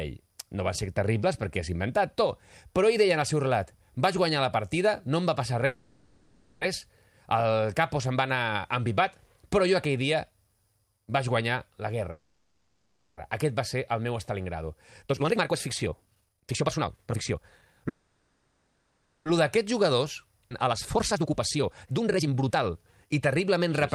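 Speech clip. Call audio freezes at 5.65–6.63, 12.11–13.19 and 17.89–19.28 s stretch the last sound into a fading buzz, likely from delayed packets draining the jitter buffer. Jitter buffer speed-up from 14.31 to 17.88 s (139% speed) and 19.37 to 23.66 s (127%) trims pitch periods, so the speech sounds hurried at normal pitch. A skip ahead at 20.5 s drops roughly 0.7 s of audio, joining the two sides abruptly.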